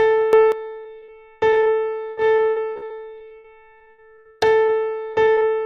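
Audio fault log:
0.33–0.52 s, sudden gain jump: sound and background noise leap together by about 12 dB with no ramp, likely a gain setting or bit shift applied instantly, unlike dropouts where only content breaks.
0.83–0.87 s, 0.99–1.04 s and 1.04–1.10 s, short concealed packet loss: isolated 20–40 ms holes patched by extending the preceding sound, heard as brief smears or wobbles rather than sustained choppiness.
1.50–1.68 s, 2.10–4.70 s and 5.12–5.51 s, repeated packet loss (robotic sound): holes recur closely, 16 in the long middle stretch with gaps up to 77 ms, so patched fragments chain into a choppy texture instead of single smears.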